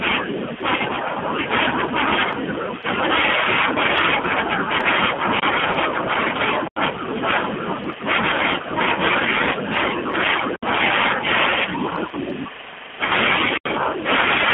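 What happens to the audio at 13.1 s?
From 13.06 to 13.13 s there are lost AMR speech frames. For about 40 ms, which fits two dropped 20 ms frames, the decoder fills the gap by repeating the last good pitch and vocal tract settings at falling gain. The sound smears briefly with a dip and warble, then recovers.

Underneath, the AMR narrowband mobile codec runs at 7.4 kbps. It confines the audio to roughly 150 Hz to 3.4 kHz and gives the speech a plainly audible buzzy, synthetic quality from its low-rate vocal tract model.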